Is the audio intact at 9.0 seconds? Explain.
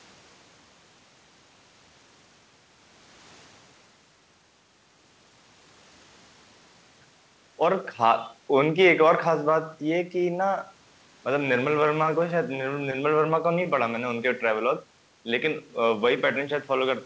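Yes, the speech at 9.0 seconds is intact, carried through the WebRTC call path with its G.722 coding, which leaves nothing above 8 kHz.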